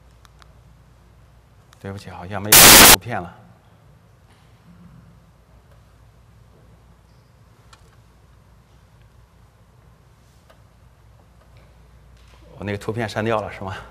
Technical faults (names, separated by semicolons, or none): samples built from the wrong bytes